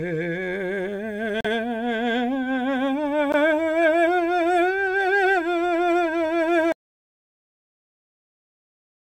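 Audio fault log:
1.41–1.46 s, Bluetooth stall: the music breaks off into a brief hole of about 39 ms of silence, then carries on, so it reads as a tiny hiccup or skip rather than a fade. The likely cause is a wireless link hitting interference, so packets arrived late, the headphone buffer emptied and playback froze until the missing data was resent and the stream could resume.
6.72 s to the end, audio dropout to silence: the music cuts off abruptly mid-flow and never returns. What follows is dead digital silence with no room tone or noise floor underneath, and the rest of the performance is simply missing. The likely cause is the input feeding the recorder disappearing, whether through a disconnected source, a failed connection or an accidental mute, while recording carried on and filled the remaining time with silence.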